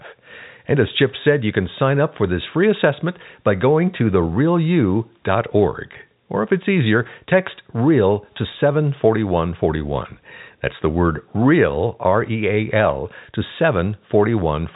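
Speech heard over a G.711 telephone channel, with nothing technically wrong in it.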